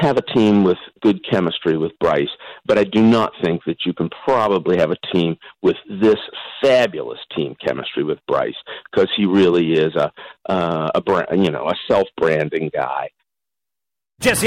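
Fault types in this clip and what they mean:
Hard clipping: harsh crackle and fuzz ride on the loudest moments across the whole clip. The signal was pushed about 10 dB beyond what one stage could pass, so a small share of peaks were sliced flat, spraying high harmonics.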